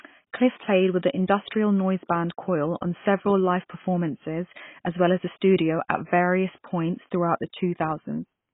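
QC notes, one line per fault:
throughout, AAC compression: likely a heavily squeezed AAC-LC encode, fitting roughly 16 kbps, that drops everything above 3.8 kHz, so the speech sounds dull and smeared.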